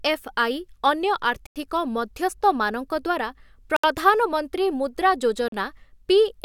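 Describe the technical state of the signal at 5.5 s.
At 5.48 to 5.52 s the speech drops to silence for about 40 ms, then resumes: a Bluetooth stall, likely from interference delaying packets until the headphone buffer emptied.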